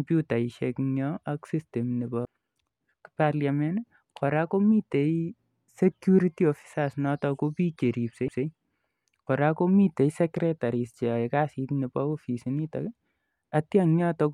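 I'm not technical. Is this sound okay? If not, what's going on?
No. At 2.25 s and again at 8.28 s there's a tiny tick and the speech jumps. That's a CD skip: the player's laser slipped to another turn of the disc's spiral and resumed elsewhere.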